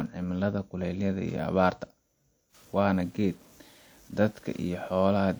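From about 2.55 s through to the end, the speech picks up a grainy, fizzy edge that tracks the voice itself, getting rougher as the level drops and sputtering on the quietest tails. That's low bit depth without dither: the signal was likely chopped down to very few levels by plain truncation, which fits 8-bit, so the rounding error sits roughly 30 dB under the speech and moves with it instead of washing out as steady hiss.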